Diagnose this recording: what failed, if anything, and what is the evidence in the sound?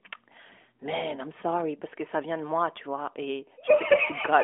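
Nothing failed: the speech comes through an AMR-NB narrowband link at 12.2 kbps, confined to a 300 Hz to 3.6 kHz line band with nothing above 3.7 kHz and only the light coding texture that path leaves behind.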